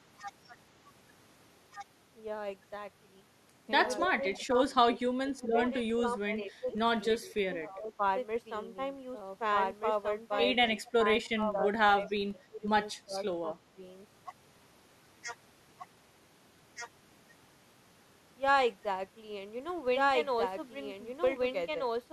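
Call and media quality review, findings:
Doubled audio track, throughout: full-band copy of the speech about 1.5 s behind at roughly equal level, no decay or room colour. Likely a second capture path or an edit holding two copies. Waveform shows every envelope repeated; spectrogram shows duplicated formant patterns offset in time.

Filter restarted on every block, throughout: steady 21.5 Hz tick-buzz that rises and falls with speech level, which fits a filter reset at each 2048-sample block. Spectrogram shows evenly spaced thin vertical lines; waveform shows small transients at each block start.

Speech suppressed in double talk, 3.99–8.02 s and 10.81–13.82 s: talker dips and chops for roughly 2 s and 1.5 s in total, deepest drops about 15 dB and 20 dB. Likely the echo canceller attenuating during overlap. Spectrogram shows patchy gaps and lost highs.

Echo leak, 4.0–4.46 s, 10.85–10.91 s, 12.07–12.11 s: delayed copy of the voice 248 ms behind, about 30 dB and 25 dB below the speech. 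Likely residual loudspeaker echo the far-end canceller did not remove. Spectrogram shows faint, 248 ms-shifted formant traces.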